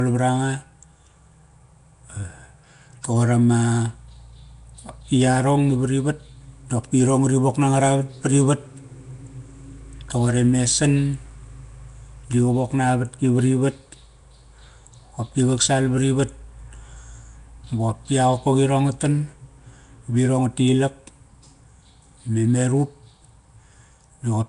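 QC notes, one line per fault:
Throughout, Nellymoser compression: the speech carries a rough, hissy halo and a smeared, underwater quality, with plainly audible damage and nothing above about 10.6 kHz. This is likely the Flash-era Nellymoser Asao codec, which fits a rate around 44 kbps. It spends a fixed two bits per sample on each 256-sample block, so weak bands get no bits and are filled with noise, and that substituted noise is the hiss around the speech.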